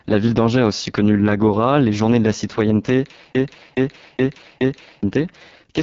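AMR wideband (HD Voice) coding runs throughout: speech is rebuilt from a pulse-excited vocal tract model, and the heavy rough, raspy damage fits the lowest 6.6 kbit/s mode, with nothing above 7.5 kHz.

A broken-record loop runs from 3.35 to 5.03 s, right after "de la citoyenneté": a 0.42 s fragment repeats exactly four times back to back, replacing the audio that should have played. The likely cause is a stalled player or stream resending its last buffer.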